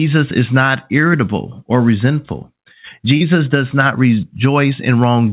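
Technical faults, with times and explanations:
3.17 to 3.23 s, short concealed packet loss: 30 ms of audio reached the decoder too late. The receiver stretched the preceding sound across 33 ms, then blended back into the real signal. A brief smear results just before "does not".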